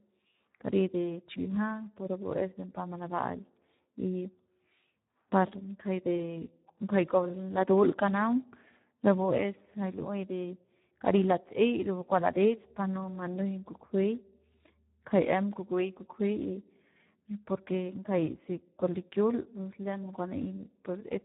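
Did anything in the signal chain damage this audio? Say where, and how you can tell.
Yes, at the codec stage. The Speex codec damage runs through the whole speech clip: it sounds hoarse and buzzy, edging toward robotic, and nothing comes through above about 3.8 kHz. That suggests a low setting around 8 kbps, where CELP starves the excitation.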